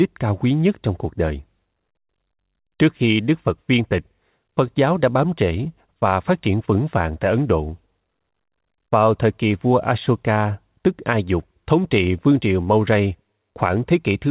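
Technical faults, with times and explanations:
Nothing here counts as a fault: the speech just comes over a WebRTC call path using G.711 A-law at 64 kbps, which is why nothing reaches above 4 kHz.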